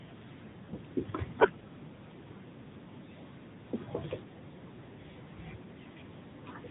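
From start to finish the speech carries AMR narrowband mobile codec damage, and it is plainly audible. The band is cut off at 4 kHz, so a spectrogram shows an empty region above that line. The buzzy, synthetic texture points to a mid-rate AMR-NB mode, around 10 kbps.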